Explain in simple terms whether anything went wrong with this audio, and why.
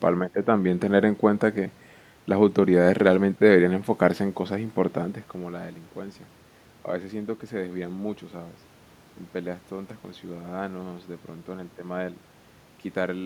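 Nothing went wrong with this speech recording. You can hear some background noise from the room, and the voice gets quieter or louder around 5 seconds as the talker moves relative to the microphone, but both are part of how it was recorded.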